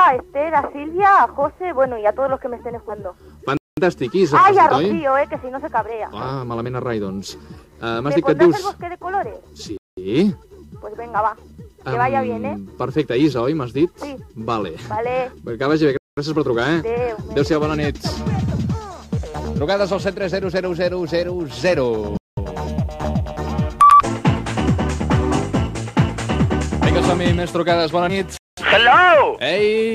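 Compressed frames skipped at 2.89 s: the decoder drops damaged or missing frames, so the audio jumps ahead about 150 ms (around seven 20 ms frames). Gap between chunks at 3.57 s: the audio arrives in 6 s chunks with 200 ms of silence at each join, heard as short holes that recur at 9.77, 15.97 and 22.17 s. Frames are skipped again at 23.03 s, losing about 70 ms, and at 28.1 s, losing about 40 ms. A final chunk gap follows at 28.37 s.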